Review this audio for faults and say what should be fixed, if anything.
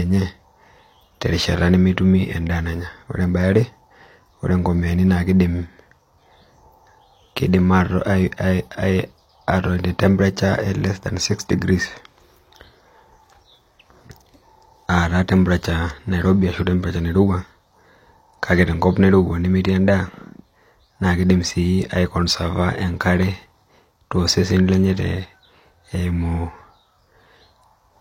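A faint, steady tick, about ten times a second, runs through the speech from 0.14 s to 27.96 s, some three hundred clock slip clicks in all. The likely cause is two unsynchronised clocks differing by around 200 ppm, dropping or repeating a single sample whenever the drift reaches one. Locking both devices to a common word clock, or resampling between them, would prevent it.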